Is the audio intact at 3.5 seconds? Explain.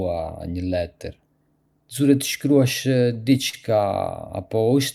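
No. From 3.49 to 3.55 s a sound in the speech is held too long, with a faint buzz or dip where it stretches, though nothing is actually missing. This is a short stall from a late packet: the next packet had not arrived when due, so the jitter buffer ran dry and the receiver extended the last sound for about 41 ms. When the packet came in, playback resumed from the same point, leaving everything after it running 41 ms later.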